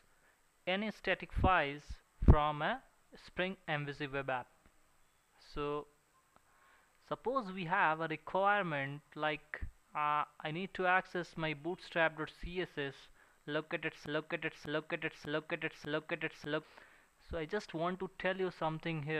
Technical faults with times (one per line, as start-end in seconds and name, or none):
14.06-16.63 broken-record loop